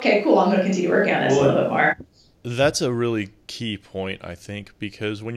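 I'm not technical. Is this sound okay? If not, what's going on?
No. From the start until about 1.9 s, it likely switched to a distant microphone, so the voice sounds roomy, hollow and thin before suddenly snapping back close.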